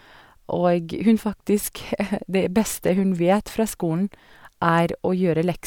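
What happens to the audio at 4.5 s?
Nothing goes wrong at 4.5 s; the speech carries on intact through that moment, with no dropout, click or distortion.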